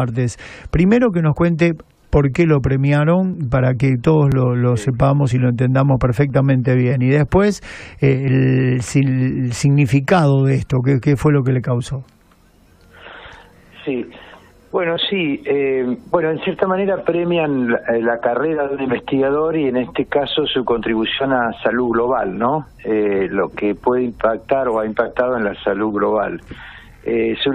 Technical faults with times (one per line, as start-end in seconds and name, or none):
1.36 overlap between stream segments
2.34 overlap between stream segments
3.33 overlap between stream segments
4.32 overlap between stream segments
5.31 overlap between stream segments
6.30 overlap between stream segments
7.29 overlap between stream segments
8.28 overlap between stream segments